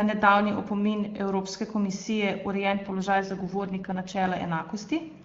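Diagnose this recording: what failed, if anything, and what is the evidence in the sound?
The network stage failed: an AMR rate drop pushed the wideband (HD Voice) codec down from its clean top rate to a far lower one between 2.62 s and 4.26 s. The sound fits a fall to the 6.6 kbit/s floor, with the freed bits going to error protection on a weak radio link. The bandwidth holds and there is no gap, but the speech turns rough, raspy and synthetic until clarity returns at 4.26 s.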